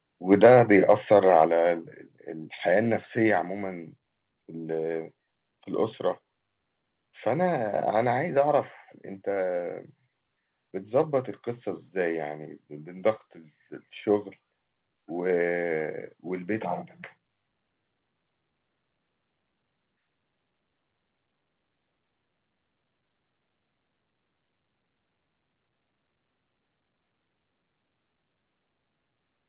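From 0.32 to 1.43 s the loudest peaks crackle harshly, their tops flattened at the converter, likely microphone overload driving the input about 4 dB too hot, clipping roughly one percent of samples. At 0.46 s the level drops about 2 dB, then about 5 dB at 1.47 s. These are sudden steps, likely the microphone volume being stepped down automatically after the distorted peaks. Throughout, nothing is heard above 4 kHz, which fits the narrowband G.711 A-law call path.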